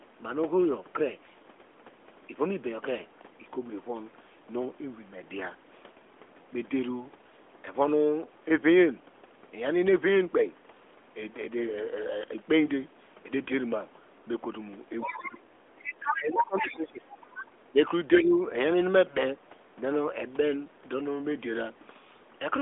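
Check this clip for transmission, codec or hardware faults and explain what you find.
Two stretches of the speech are pulled down, one from 15.06 to 17.1 s and a shorter one from 17.63 to 18.34 s, over a narrowband mobile line whose top end stops near 3.7 kHz.

Speech suppressed in double talk, 15.06 to 17.1 s and 17.63 to 18.34 s: the likely cause is an echo canceller that treated this talker as echo while the far side was also talking and attenuated everything it sent. The voice sinks by up to about 20 dB, for roughly a second and a half in the first stretch and a third of a second in the second.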